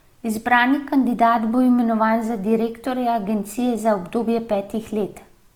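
Across the whole speech clip the audio has a grainy, rough texture, with tonal parts turning noisy rather than swirling. This is likely Opus compression in its CELT music mode at a low rate, consistent with about 24 kbps. The encoder fills starved bands with folded or noise content while keeping full bandwidth.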